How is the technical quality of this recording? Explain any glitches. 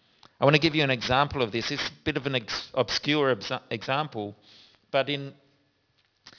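The recording is compromised by aliasing for its whole length. Sibilants come out gritty and metallic, with false, unrelated tones roughly 15 dB below the speech and the spectrum crowding hard against 5.5 kHz. This points to a drop to about 11 kHz sampling without an anti-aliasing filter, so content above 5.5 kHz folded back down.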